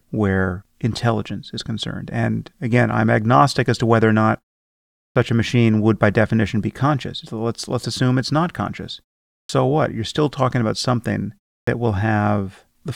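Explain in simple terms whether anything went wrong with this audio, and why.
Clipped start after a pause at 5.09, 9.43 and 11.61 s: after each short silence, the playback device dozes off and needs a moment to wake, so roughly the first 60 to 70 ms of sound is swallowed and the speech restarts abruptly.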